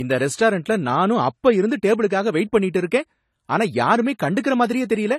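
From start to finish the speech sounds dull and watery, with smeared, swirling sibilants and no content above 14.1 kHz. On a spectrogram this appears as a hard, flat ceiling at 14.1 kHz running the full width of the clip, with patchy, blurred detail beneath it. The likely cause is low-bitrate audio saved at a high bitrate: the sound fits a heavily compressed first encode re-saved as a large MP3, which cannot restore the discarded detail.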